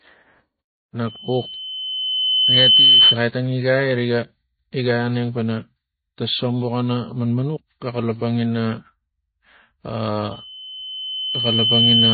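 Throughout the speech, a starved encoder has likely thrown away detail, pointing to MP3 compression at a very low bitrate, around 24 kbps. Nothing remains above 4.6 kHz, so the sound is dull, with plainly audible watery, swirling artefacts and smeared consonants.

From 1.07 to 3.19 s, a microphone picks up the loudspeaker it feeds, and the loop runs away at one frequency. This loudspeaker feedback squeal is a steady 3 kHz tone that swells over about two seconds to roughly 10 dB above the speech, stopping just before "tang igai riga igai". From 10.31 s to the end, the same loop builds a 3 kHz squeal over about a second and a half, to roughly 5 dB above the speech.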